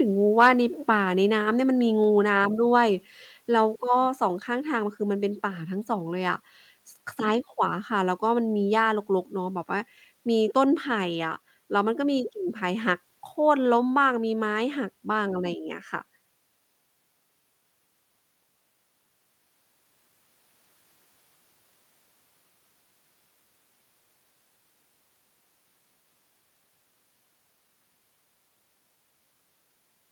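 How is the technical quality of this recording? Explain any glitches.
The recording has a short burst of distortion near the start, followed by two small level drops.

From 0.40 to 0.48 s there is microphone overload. The loudest peaks hit the converter's ceiling, by about 3 dB, and their tops are flattened. A few percent of samples are cut. It sounds harsh and crackly. Too much input gain is the likely cause.

At 1.02 s and again at 2.04 s the microphone volume steps down. Each step is about 1 dB. Speech and background both get slightly quieter at once. This is likely the call software reacting to the clipped peak by lowering the input gain.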